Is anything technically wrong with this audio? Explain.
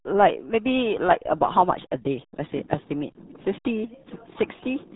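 Yes. Throughout, the speech sounds muffled and gargly, with nothing above 3.8 kHz. This is heavy RealAudio 14.4 codec damage: the speech coder squeezes the signal into a very low rate, which fits an 8 kbit/s stream, discarding upper frequencies and smearing detail into a watery gargle.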